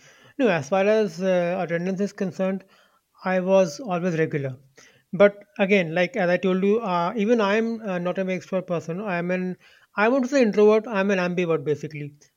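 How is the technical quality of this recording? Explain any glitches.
Nothing here trips the ear: the speech comes through steady and unbroken, with no glitches to point to anywhere in the recording.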